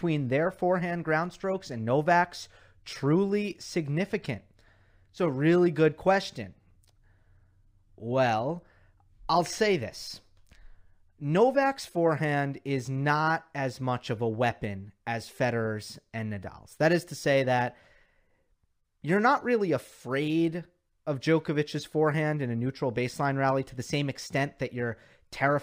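A speech recording with imaging from linear upsampling running the whole way through. It sounds like a 24 kHz original raised to 48 kHz by straight-line interpolation, so the top end is softened and a faint mirrored copy, roughly 35 dB down, sits between 12 and 24 kHz, adding a light metallic shimmer to sibilants.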